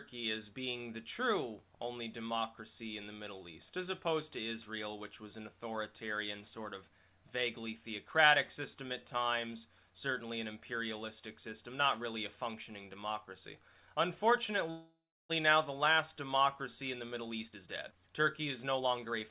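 At 14.7 s the sound stops moving forward and the last moment is drawn out as a buzz or hiss that fades, going silent for about 330 ms before the audio resumes at 15.31 s, right where it left off. This is a call audio freeze, likely caused by packets held up in transit so the jitter buffer ran dry. About 594 ms was filled in, nothing was lost, and the delay grew by that same amount.

From 16.99 to 18.24 s the audio sounds plainly hurried, running at 127% speed with its pitch unchanged, and from 18.65 to 19.29 s it is rushed again at 113%. This is jitter buffer speed-up. With more audio queued than the buffer aims to hold, the receiver repeatedly cut out short pitch-period pieces to reduce the delay, removing roughly 400 ms in the first stretch and roughly 100 ms in the second. Throughout, the G.711 call path leaves nothing above 4 kHz.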